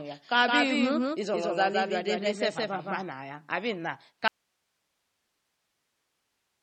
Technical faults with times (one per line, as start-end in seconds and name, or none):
0.00-6.62 MP3 compression
0.00-3.02 doubled audio track
4.28-6.62 audio dropout to a faint residue